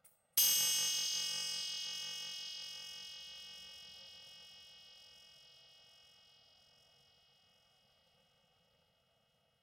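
From start to finish the sounds carry a fault consistent with planar audio read as interleaved. The sample stream holds each channel in its own short run, but it is decoded as if left and right alternated, so every block of about 2.9 ms, which fits a 128-sample block, plays twice at double speed, one channel after the other. With blocks this short there is no clear octave shift; instead a robotic buzz at roughly 345 Hz sits over everything.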